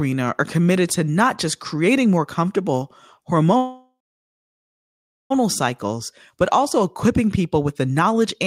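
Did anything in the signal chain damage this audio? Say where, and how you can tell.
Yes. A call audio freeze runs from 3.57 s to 5.32 s, likely from packets stalling on the network until the receiver's jitter buffer ran dry. The speech abruptly stops advancing and the last sound is stretched into a fading buzz or hiss that dies to silence for about 1.36 s of the 1.73 s gap. Speech then resumes at "cycles but also equipping" exactly where it left off, with nothing skipped, so the rest of the clip plays 1.73 s late.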